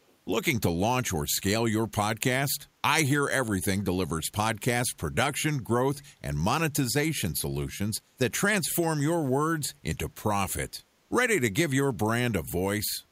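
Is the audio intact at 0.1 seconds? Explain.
No. From 0.07 to 0.14 s there is a brief echo leak: a faint, delayed copy of the speech, trailing it by 245 ms and sitting very low, around 40 dB below the direct sound. The likely cause is a far end playing the call on a loudspeaker whose echo canceller let some of the microphone pickup through. On a spectrogram it shows as a weak, time-shifted ghost of the speech harmonics; the waveform barely changes.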